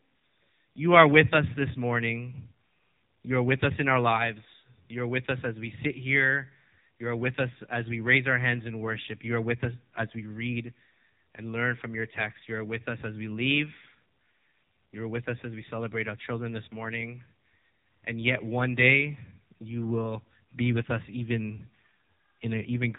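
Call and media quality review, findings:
AMR narrowband mobile codec, throughout: speech buzzy, synthetic; spectrogram empty above 3.8 kHz. Heavy vocal-tract-model coding damage, consistent with a low 6.7 kbps mode.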